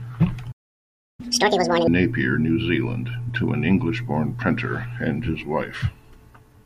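At 0.51 s the speech cuts off mid-flow and stays silent until 1.20 s, a playback stall of about 0.67 s, likely from the player running short of data or its thread being blocked. The waveform drops to a flat line, and the spectrogram shows a blank vertical band.

From 1.20 to 1.87 s comes catch-up at higher speed. The player resamples its backlog and runs it at 2.0 times normal speed, so the speech sounds hurried and chipmunk-like, raised by roughly ten semitones. The spectrogram shows harmonics stretched upward and syllables compressed, before normal spacing returns.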